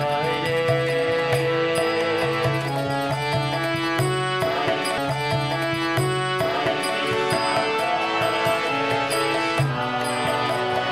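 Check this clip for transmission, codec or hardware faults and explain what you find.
One transmission fault is present: a stream segment repeated. From 4.98 s to 6.96 s, roughly two seconds of the programme play a second time, extending the clip by about 1.98 s. The player fetched or queued the same segment twice and rendered both copies back to back, so the sound jumps backward and replays material already heard. A small blip marks the splice where playback jumps back.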